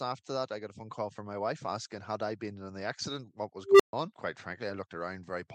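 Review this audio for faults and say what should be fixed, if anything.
Unstable filter, 3.65 to 3.93 s: feedback in a recursive filter swells a tone near 400 Hz over 146 ms, clips, then overflows into 135 ms of silence. Prevent it by checking that every new set of filter coefficients keeps the poles inside the unit circle before the filter uses them.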